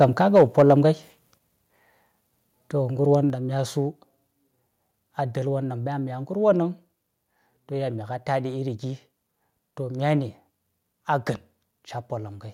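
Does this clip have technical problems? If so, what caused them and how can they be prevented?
Yes. Two related problems are audible near the start.

The first is microphone overload. At 0.02 s and again from 0.35 to 0.73 s, the loudest peaks are flattened. They push about 3 dB past the converter's ceiling, and a small share of samples is cut off. That produces a harsh, crackly edge on those syllables. The likely cause is an input gain set too high. Set the microphone gain lower so peaks stay well below full scale.

The second is the microphone volume being stepped down. The whole sound, background included, drops abruptly at 0.38 s by about 2 dB, at 1.38 s by about 4 dB, and at 3.30 s by about 4 dB. The first drop lands right inside the distorted stretch. This is likely the call software's automatic gain control reacting to the overload and lowering the input in steps. Disable automatic microphone adjustment and set a safe fixed level before recording.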